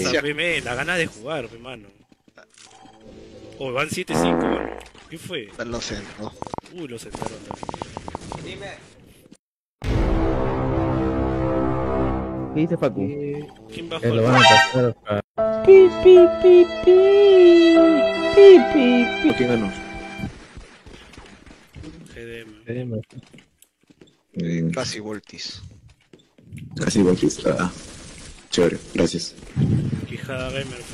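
From 6.27 to 8.36 s a train of clicks sits over the sound: around twenty sharp, similar ticks at an uneven pace, averaging about 8.7 per second, with peaks standing several decibels above the surrounding audio. The likely cause is interference from nearby equipment or a faulty connection or power supply injecting pulses into the signal. On a waveform each click is a narrow spike. On a spectrogram each appears as a thin vertical line spanning the frequency range, irregularly spaced across those two seconds.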